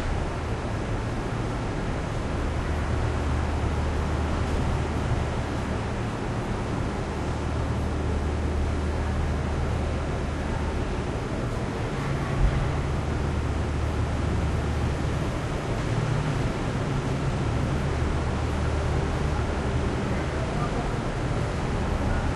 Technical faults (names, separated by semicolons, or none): none